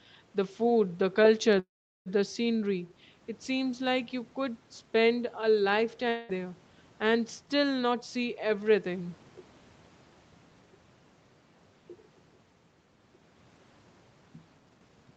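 At 1.59 to 2.08 s a call audio freeze inserts a gap of nearly half a second, likely from packets held up in transit. The last sound continues briefly as a fading buzz, then about 0.4 s of silence follows. The speech resumes where it stopped, with nothing lost but arriving later. On a waveform this is a short decaying tail and then a flat line. A spectrogram shows smeared, blurred harmonics fading into a blank band.

From 6.09 to 6.31 s a long network dropout removes about 0.2 s of speech, which never returns. The receiver fills the whole stretch with a fading buzzy continuation of the last sound rather than silence, and the audio then jumps ahead. A spectrogram shows stretched, featureless harmonics followed by an abrupt change in content.

Two jitter buffer speed-ups follow. At 7.87 to 8.80 s the speech runs at 109% speed, with about a tenth of a second of material cut. At 14.58 to 15.11 s it runs at 153%, with roughly 0.3 s cut, and sounds noticeably hurried while keeping the same pitch. 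Syllables appear compressed in time on the waveform, and the spectrogram shows harmonics at an unchanged height with tiny splice points.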